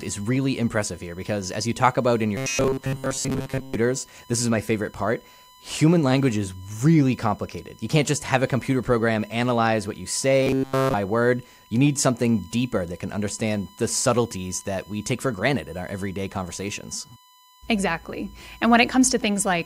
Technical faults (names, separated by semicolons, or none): USB whine; robotic sound from repeated short buffers